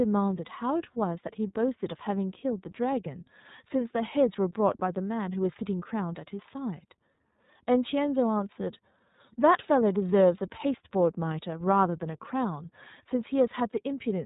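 From start to end the speech carries the sound of the iLBC codec, a narrowband VoIP coder working on 30 ms frames, with a rate that fits its 13.33 kbps mode. Each frame's excitation is coded without reference to the one before it, which leaves the voice clear but plainly rough and synthetic. Nothing survives above 3.8 kHz, so on a spectrogram the energy stops at a flat ceiling there.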